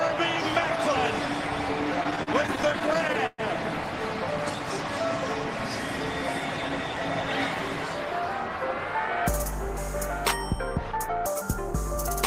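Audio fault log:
2.03–3.40 s, repeated stalls (stutter): late packets drained the jitter buffer 17 times; stretched sound filled gaps up to 122 ms, so the audio stutters and drags, nothing lost.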